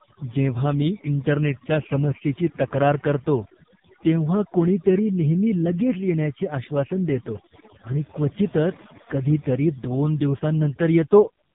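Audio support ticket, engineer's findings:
Overdone noise removal, whole clip: background dropped, breaking up into twinkling specks. Denoiser set too strong, cutting bands near noise estimate.

AMR narrowband mobile codec, throughout: heavy buzzy, synthetic speech, nothing above 3.7 kHz. Pulse-driven vocal-tract model at 5.15 kbps starving excitation detail.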